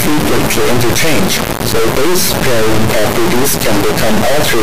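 From start to finish the speech is replaced by an extremely loud, harsh buzz, a square wave slamming between silence and full-scale clipping, which falls to dead silence where the sound gets very quiet. This is integer read as float, which fits 32-bit integer samples being decoded as 32-bit floats, so the bit patterns become values either near zero or wildly over range. A byte-order swap sounds more like dense noise, not this on-off hard-clipped buzz.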